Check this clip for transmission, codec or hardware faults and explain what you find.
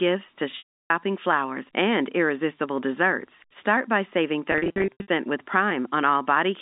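Two stretches of packet loss with pitch repetition are audible over the G.711 telephone band. From 0.58 to 0.90 s, before "flowers and irresistible desserts", about 320 ms vanishes in one run. The receiver repeats the last pitch period, fades it to silence, then cross-fades back in. From 4.52 to 5.08 s, after "by saving", 340 ms of scattered losses, none longer than 80 ms, give brief held, buzzy patches.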